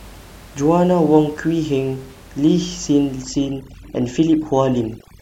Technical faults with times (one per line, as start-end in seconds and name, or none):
3.22-5.21 overdone noise removal